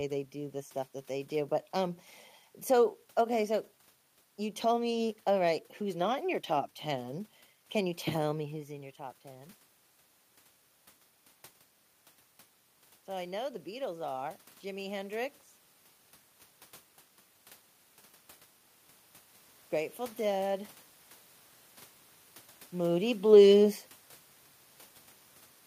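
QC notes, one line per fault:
18.50–19.61 s, automatic gain rising: speech and room noise swell together by about 4 dB over about a second, as the gain control judged the input too quiet and raised its gain gradually; the shifts near 8.5 and 22.5 s are the talker moving.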